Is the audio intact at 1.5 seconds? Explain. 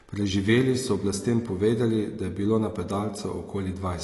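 No. Likely AAC compression, spanning the whole clip, starved the coder of bits, which fits roughly 32 kbps, so nothing survives above 11.5 kHz and speech sounds dull and smeared.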